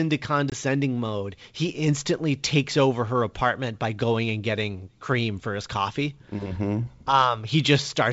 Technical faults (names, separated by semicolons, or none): packet loss on an ADPCM call